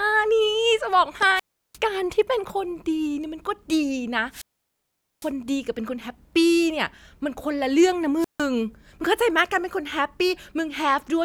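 At 1.35 s the speech hits a wireless microphone squelch dropout: the radio link weakens, hiss swells, then the receiver's squelch gates the output shut for about 0.35 s before the voice resumes at 1.78 s. The same happens at 4.30 to 5.32 s with a longer mute of about 0.81 s, and at 8.19 to 8.43 s with a brief one of about 0.15 s. On a spectrogram each shows a broadband noise haze, then a blank gap; the waveform flatlines.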